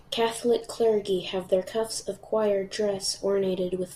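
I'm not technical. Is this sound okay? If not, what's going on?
Yes, this sound is okay, and nothing is going wrong with it.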